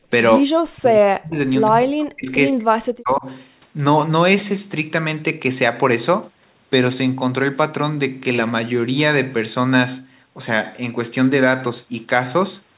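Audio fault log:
0.43–1.39 s, 1.69–2.3 s and 2.5–3.25 s, speech suppressed in double talk: the talker gets pushed down hard three times in quick succession, by as much as about 40 dB and for roughly a second or a bit less each time, so the speech dips and drops out in chunks. That's likely the echo canceller failing to tell the near talker from the far side's echo and clamping down on both, layered over the telephone-band sound, with nothing above 4 kHz, that fits a G.711 path.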